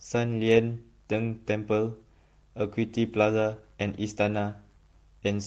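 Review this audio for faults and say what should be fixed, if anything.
Nothing stood out on listening to this speech, so there is nothing here that needs fixing.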